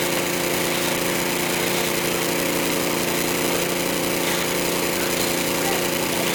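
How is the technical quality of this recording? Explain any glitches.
The technical quality of this recording of sounds is sound, with no glitches or faults audible anywhere in the signal.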